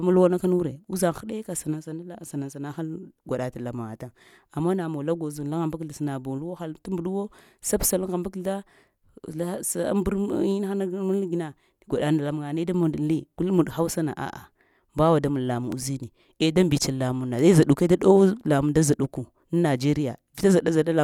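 A loud pop lands at 15.72 to 15.74 s: a single sharp click-thump, peaking a few decibels above the speech, which carries on underneath without a break. It is likely the result of a sudden voltage step or spike entering the signal path, such as a connector being disturbed, a switch, a static discharge or a driver glitch. The following circuitry rounds the spike into this short, percussive burst.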